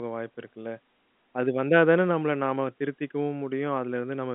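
Nothing stood out on listening to this speech, which carries the narrow band of a G.711 telephone line.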